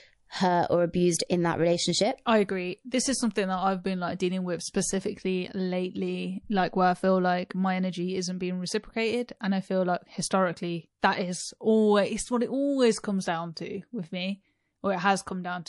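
Speech with a watery, swirly sound throughout and chirpy s sounds; this is plainly audible codec damage, likely MP3 compression at a low bitrate around 48 kbps. Pre-echo appears at 2.89, 11.00 and 13.54 s: a hiss about 10 to 16 dB above the background fills roughly 27 ms before each attack. Unlike steady swirl, it comes only just before attacks, which suggests long blocks with no switch to short ones.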